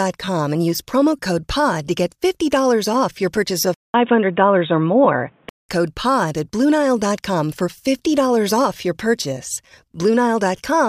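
An input switched to a poorer device, likely, runs from 3.74 to 5.69 s, right after "your purchase". A gap of about 200 ms opens at the switch, then the speech turns dull and boxy, with nothing above 3.8 kHz, as a narrower-band microphone takes over. The level shifts by roughly 5 dB, and a faint new noise floor, around 40 dB below the speech, sits underneath until the fuller sound returns at 5.69 s.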